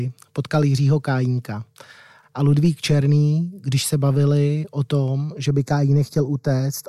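From 5.48 s to the end, one channel runs slightly late relative to the other, by well under a millisecond, a delay of only a few samples, and the two are then summed to mono. This channel delay causes comb filtering: content common to both channels cancels at evenly spaced frequencies, with the first notch around 3 kHz. The speech loses presence and turns hollow and slightly phasey, with a fixed dullness in the upper range.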